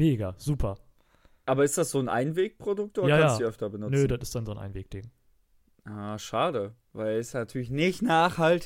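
Speech recording, no technical faults detected anywhere in the clip.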